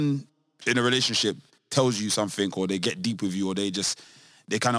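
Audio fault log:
Throughout: aliasing. The band stops sharply at 11 kHz, which points to a resample from 48 kHz down to 22 kHz without an adequate low-pass filter first. Speech energy above 11 kHz, mostly sibilant and fricative content, has folded back below that edge as false tones unrelated to the original pitches. These images sit somewhere around 20 dB under the speech, enough to give the s and sh sounds a gritty, metallic edge with the spectrum pressed hard against the cutoff.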